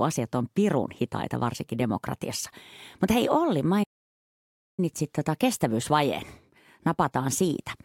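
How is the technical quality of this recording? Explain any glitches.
The speech has one clear glitch. From 3.83 to 4.80 s it falls silent mid-flow for about 0.95 s before resuming, a playback stall, likely from the player running short of data.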